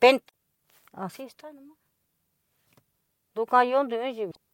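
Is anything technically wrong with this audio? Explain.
Yes, there's damaged data in the compressed stream, twice: 0.25 to 0.30 s and 4.27 to 4.37 s. Corrupted bytes make the decoder misread those frames and lose sync while it hunts for the next frame header, so each spot comes out as a short glitch.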